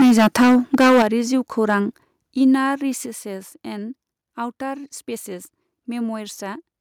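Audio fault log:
0.00–1.03 s, microphone overload: peaks run about 11 dB past full scale with roughly a fifth of samples flattened, likely from excessive input gain, giving a harsh crackle before "जिउखौरां इनार".
1.02 s, 2.04 s and 3.06 s, microphone volume stepped down: the whole level drops abruptly by about 8 dB, 5 dB and 6 dB, likely the call software cutting input gain after the clipping. The first comes just before "जिउखौरां इनार", the last just after it.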